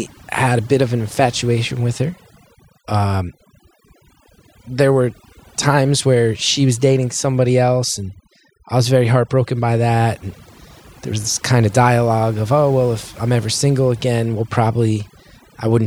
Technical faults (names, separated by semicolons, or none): overdone noise removal